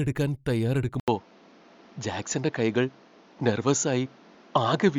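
Bluetooth LC3 compression runs from the start: a grainy, breathy edge on the speech, likely from a low-rate transform codec, consistent with about 48 kbps, noise-filling zeroed upper bands.

Input switched to a poorer device at 1.00 s: after an 80 ms silence, the speech turns dull, capped at 7.2 kHz, with new noise about 30 dB down and the level unchanged, likely a microphone change.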